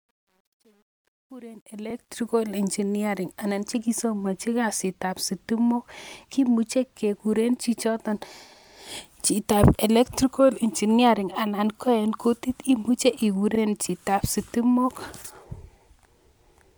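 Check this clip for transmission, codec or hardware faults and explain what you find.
Two faults are audible: truncation distortion on the opening fade-in, and a repeated frame late in the clip.

Truncation distortion on a fade runs from 0.0 to 2.31 s, just before "engineering anan chekisomonji kasitab". It is worst from 0.0 to 1.68 s. The speech fades in, but the gain stage dropped the low-order bits without dither. The coarse steps point to roughly 10-bit resolution. At the quietest part of the ramp the waveform collapses into a few square steps, so the sound comes in gritty before the level is high enough to mask it.

Repeated frames occur at 13.55 to 13.58 s. A 32 ms block of compressed audio was delivered twice, which fits a single codec frame being duplicated in transmission or writing. The decoder played that slice one extra time, adding 32 ms to the clip. It is heard as a brief stutter.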